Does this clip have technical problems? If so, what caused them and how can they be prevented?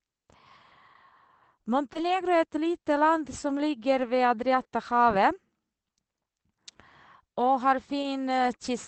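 Yes. Two kinds of packet-loss fault can be heard in this speech.

Short concealed packet loss, 1.93 to 1.97 s: about 20 ms of audio arrived too late for the decoder. The receiver bridged roughly 12 ms by continuing the preceding sound, as a pitched extension if voiced or as shaped noise if not, then faded back into real audio. The result is a brief smear or wobble, and a short consonant there can disappear. A larger jitter buffer or a more stable network path would prevent it.

Lost packet rebuilt from error correction, at 1.95 to 1.97 s, at 4.55 to 4.57 s just after "ligger ved", and at 8.03 to 8.05 s: each time a single 20 ms packet was lost, but the following packet carried a low-bitrate copy through Opus in-band forward error correction. The decoder played that copy, so there is no gap, only a moment of rougher, noisier sound. The first instance overlaps the concealed loss. The call path is limited to about 8 kHz audio bandwidth, at a rate that fits roughly 24 kbps. 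Reducing packet loss on the network would prevent these rebuilt frames.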